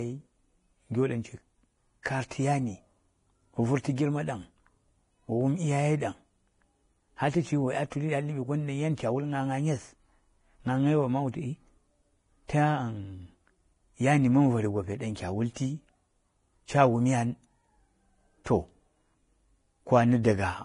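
Vorbis compression runs throughout the speech, from start to finish: nothing sounds above 10.5 kHz, and the treble that remains has a hissy, grainy texture, with roughened tones and smeared consonant onsets. The likely cause is heavy low-bitrate Vorbis encoding, consistent with roughly 30 kbps. At that rate the encoder lowers its cut-off and quantises the upper bands so coarsely that fine detail is replaced by noise of similar energy.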